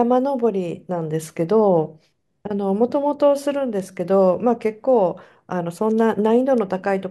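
Word clock ticks run from 1.02 s to 6.58 s in this speech: about five sharp clicks, roughly one every one and a half seconds. The receiving device's clock isn't locked to the sender's, and the spacing suggests a drift of roughly 15 ppm, so each slip drops or repeats a single sample.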